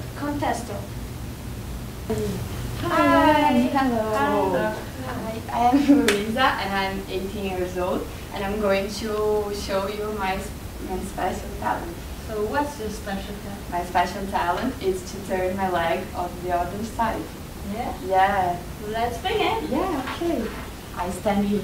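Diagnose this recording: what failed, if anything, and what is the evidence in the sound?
Nothing in the recording points to a failure at any stage of the chain. No event in the sound calls for a diagnosis, so there is no mechanism to trace.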